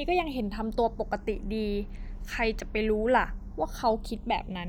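Speech, with channels drifting apart throughout: separately clocked sources, roughly 150 ppm apart, let the inter-channel delay creep toward a third of a millisecond, so mono playback flanges slowly.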